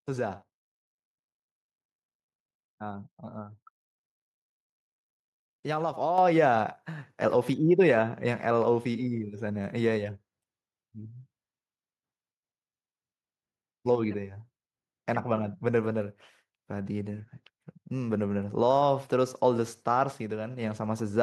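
At 6.18 s the microphone volume is stepped up: the call software judged the input too quiet and raised the device level by about 6 dB at once. The speech and background noise jump together, unlike a talker moving closer, which changes only the speech.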